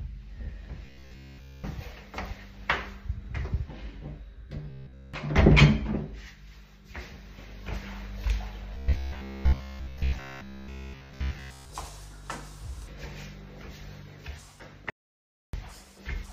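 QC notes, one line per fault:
0.86–1.65 s, 4.70–5.14 s, 8.75–11.70 s: robotic sound from repeated short buffers. The sound goes to a rigid 66.7 Hz buzz, likely a 15 ms chunk looped while real audio was skipped.
14.90–15.53 s: audio dropout to silence. About 0.63 s of silence with no room tone, likely the input dropping out while the recorder kept writing.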